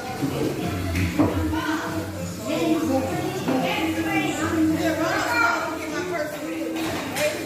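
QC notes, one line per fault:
No technical faults were found in the signal.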